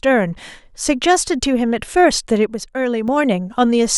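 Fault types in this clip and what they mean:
One channel drops out: From 2.46 to 3.08 s the speech suddenly gets quieter, falling by about 6 dB, then comes back to full level. The likely cause is one side of a stereo feed going silent while the other keeps playing. When the two sides are summed to mono, material shared by both loses half its contribution. Anything carried only by the missing side vanishes for that stretch. The drop is abrupt at both edges.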